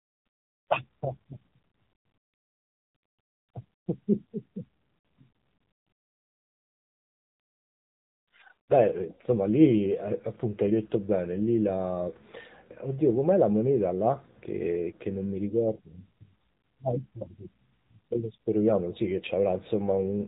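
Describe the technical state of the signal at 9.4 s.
At 9.4 s the speech is still inside the AMR narrowband mobile codec damage that runs through the whole clip. Nothing above 3.8 kHz passes, and the low bit budget, which fits roughly 7.4 kbps, makes the vocal-tract model sound buzzy and synthetic. A plain telephone band-limit would muffle without that artificial, pulse-driven coarseness.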